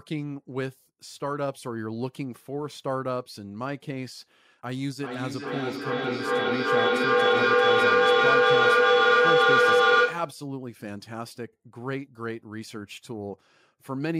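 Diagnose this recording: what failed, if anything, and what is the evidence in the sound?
From 4.99 s to 10.46 s the speech returns roughly every 400 ms, thinner and more ringing each pass, piling up to about 11 dB above the talker. This is feedback echo between two devices, a call-processing failure: each echo canceller ignores the other device's playback.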